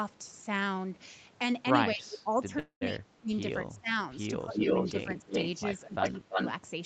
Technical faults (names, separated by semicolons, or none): speech suppressed in double talk; call audio freeze; echo leak